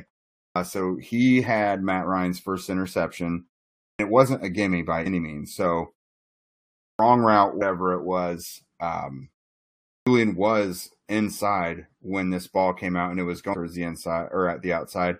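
At 0.47 to 0.56 s and again at 3.90 to 3.99 s, speech resumes after pauses of about half a second with its onset missing, roughly 90 ms cut each time. This is a clipped start after a pause: the output path had gone idle and was still waking. Unlike muted pauses, which only drop the background, this loses the opening sounds. At 5.05 s comes the first case of compressed frames skipped. A few frames, consistent with 23.2 ms frames, never play, so about a tenth of a second vanishes. The clipped start recurs at 6.91 to 6.99 s after a 1.04 s pause, and frames drop again at 7.61 s, about a tenth of a second. Another clipped start follows at 9.97 to 10.07 s. The last skip, at 13.53 s, loses about a fifth of a second. That length is still a whole number of frames, which is what separates it from a random dropout.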